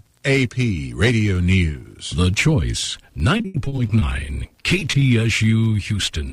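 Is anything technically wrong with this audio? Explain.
Yes. Repeated packet loss (robotic sound) at 3.37–4.03 s and 4.49–5.03 s: lost packets were patched by stretching prior audio, leaving choppy stutters, heaviest in the first stretch.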